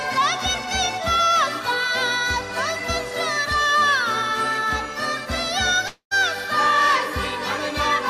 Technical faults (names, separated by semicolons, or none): long network dropout